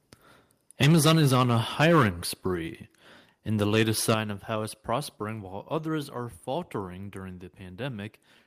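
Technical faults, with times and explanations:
0.80–2.08 s, microphone overload: peaks run about 13 dB past the converter's limit, flattening roughly a tenth of samples into harsh crackle, likely from excessive microphone input gain.
0.84 s, microphone volume stepped down: level drops abruptly by 3 dB mid-overload, likely the call software cutting input gain after detecting clipping.
3.61–3.83 s, microphone overload: a shorter burst about 4 dB over the converter's limit, with a small share of samples flattened into a rough edge, likely from input gain set too high.
4.09–4.14 s, microphone overload: a brief peak about 6 dB over the limit, with a sizeable share of samples clipped and a crackly edge, likely from overdriven input gain.
4.14 s, microphone volume stepped down: sound and background drop 7 dB at once right after the clipped peak, likely an automatic gain reduction triggered by that overload.
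5.16 s, microphone volume stepped down: another sudden 3 dB fall in overall level, likely the software lowering microphone input volume again in a single step.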